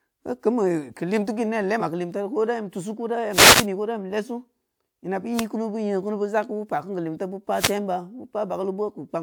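At 1.79 to 1.82 s the speech lurches forward, as though a sliver of sound has vanished. This is compressed frames skipped: one compressed frame, some 40 ms of audio, never reached the output, either lost from the stream or discarded by the decoder as corrupt. The jump matches a frame of about 43 ms.

Three bursts of hissy static then wash over the speech, from 3.30 to 3.66 s just before "ko da", from 5.34 to 5.45 s, and from 7.53 to 7.75 s. Each is a wireless microphone noise hit. The FM radio link from the microphone fades briefly as reflected signals cancel at the receiver, so the receiver's own noise swells up until the signal recovers.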